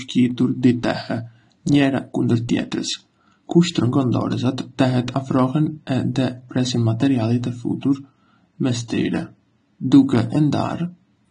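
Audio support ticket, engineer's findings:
Dull and smeared speech throughout, nothing above 9.8 kHz, warbly fizz on sibilants. Likely AAC compression, AAC-LC starved for bits, fits something around 32 kbps. Encoder lops off the top band and quantises the rest coarsely, so the damage is plainly audible.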